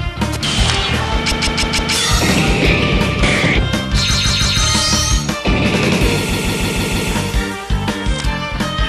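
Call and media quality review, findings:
Repeated frames, 1.31–1.94 s: a 157 ms block of audio replays four extra times, heard as a stutter. Adds 0.63 s.
Repeated frames, 4.13–4.60 s: a 157 ms block, three extra plays, adds 0.47 s.
Repeated frames, 6.32–7.11 s: five extra plays, adds 0.78 s.
Probable component: encoder output or transport resending compressed frames. Block length fits a run of several codec frames, so the decoder plays it again.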